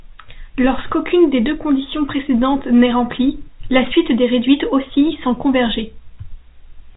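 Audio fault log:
No faults found.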